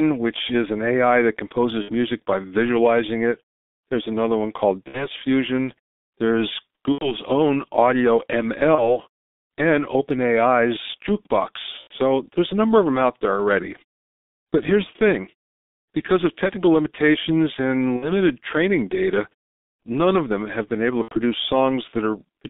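Throughout the speech, the line runs through the G.723.1 codec, heavily damaged, at a rate consistent with its 6.3 kbit/s mode. It keeps only about 250 Hz to 3.7 kHz and tracks the voice model coarsely, so everything sounds muffled and hoarse, with smeared consonants. Pauses still fade to silence between phrases.

VoIP packet loss concealed by the speech codec strikes at 1.82, 4.89 (after "another one called"), 6.92, 8.75, 11.81, 17.96 (after "because of technical limitations", before "training data none of") and 21.02 s (after "have been able to"). Each gap, roughly 30 to 90 ms, fits one to three missing 30 ms frames. The decoder stretches its last sound into a buzzy tone or coloured noise that fades, and the voice stays weak or distorted for tens of milliseconds or more after packets return.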